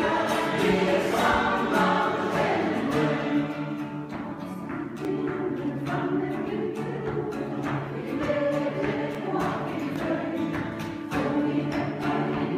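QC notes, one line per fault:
5.05 s, 9.15 s, 9.96 s and 12.04 s, dropped samples: four isolated sharp clicks, each likely from under a millisecond of audio going missing so the waveform jumps abruptly. Each shows as a step in the waveform and a thin vertical line across the spectrogram.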